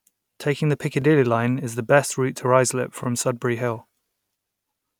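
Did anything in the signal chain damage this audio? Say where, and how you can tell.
Yes. There is a brief stutter at 1.02 to 1.04 s and again at 3.04 to 3.06 s. At each point a sliver of speech about 23 ms long plays twice, heard as a click-like hiccup. These are overlapping chunks at the buffer or processing stage. The audio was handled in 2.0 s blocks, and each block began slightly before the previous one ended, so the overlap is replayed at every join.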